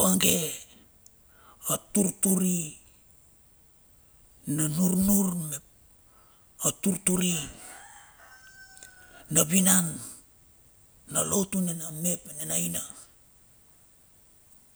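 No technical faults can be heard anywhere in the speech recording, and the signal holds steady throughout.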